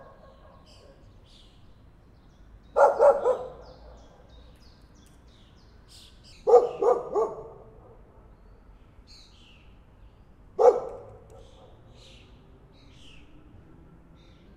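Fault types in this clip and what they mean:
Section at the wrong speed: from 6.33 s to 14.47 s the sound drops to about three semitones lower and drags, running at 0.861 times its proper speed, with pitch and pace falling together. This likely comes from that stretch being played against the wrong clock.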